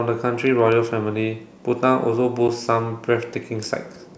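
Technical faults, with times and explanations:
2.48 s, block of digital silence: about 10 ms of the speech output was replaced by silence, the kind of hole left when the output buffer isn't filled in time. The signal drops straight to digital silence and jumps back with no fade, so each edge is an abrupt step in the waveform. With a gap this short the two edges merge, and the result is a tick or dip rather than an audible pause.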